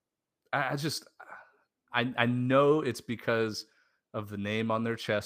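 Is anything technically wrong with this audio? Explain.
No, nothing technically wrong stood out on listening to this speech clip.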